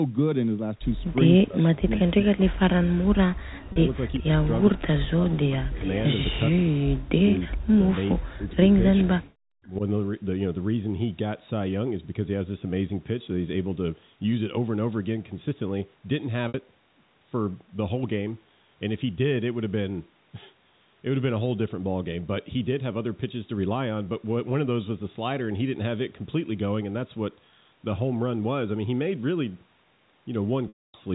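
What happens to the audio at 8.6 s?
Between 6.51 and 9.07 s the speech is suppressed in double talk: it dips by as much as about 40 dB in pieces, likely because the echo canceller turned the talker down while the other side spoke. Overlapping this, from 8.51 to 9.02 s, there is an echo leak: a copy of the speech returns about 420 ms late, roughly 20 dB below it, likely from loudspeaker pickup the far end's echo canceller did not fully remove.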